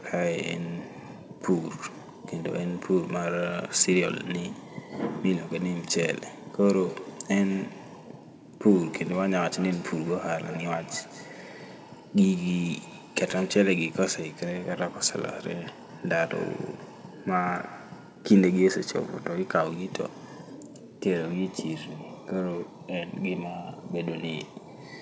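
From 6.61 to 13.84 s and again from 16.0 to 18.63 s, feedback echo between two devices makes the speech return at a steady interval of roughly a fifth of a second, peaking about 18 dB below the speech. Unlike room reverberation, the repeats are discrete and evenly spaced, each thinner and more ringing. That happens when another device's microphone picks up the playback and sends it back, where no echo canceller covers it.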